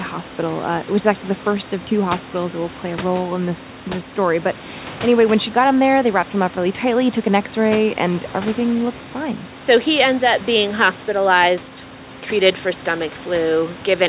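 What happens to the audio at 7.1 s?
Nothing goes wrong at 7.1 s: the speech continues intact through that moment, with the room's background noise sitting about 19 dB below it and the call path's band limit at 4 kHz unchanged.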